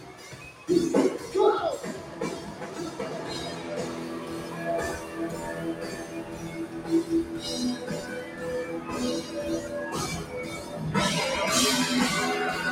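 A speech-oriented noise suppressor applied to music or sounds runs throughout, treating sustained material as noise and pulling it down by roughly 10 dB, so the audio pumps and thins.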